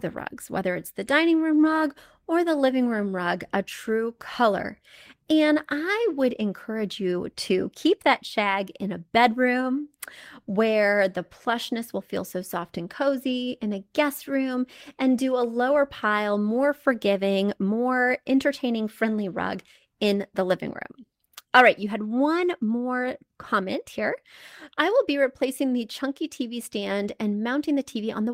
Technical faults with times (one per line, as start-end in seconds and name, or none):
none